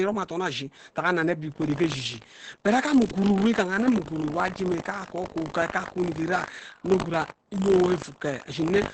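From the start the speech sounds muffled, hoarse and faintly robotic, with nothing above 8.7 kHz. This is heavy Opus voice compression: the SILK linear-prediction coder, running wideband in 20 ms frames, codes the excitation coarsely at what sounds like a bitrate near 10 kbps.

From 1.5 s to the end, a steady 50 Hz robotic buzz rides on the speech. This is buffer tearing. The writer and the hardware reader of the ring buffer have drifted, so in every 20 ms period a small sliver, a few percent, replays audio from roughly 70 ms earlier between two hard joins.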